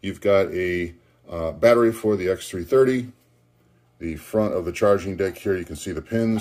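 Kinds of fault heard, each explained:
No technical faults can be heard anywhere in this audio. Nothing breaks up, drops out or shifts in level or pitch at any point.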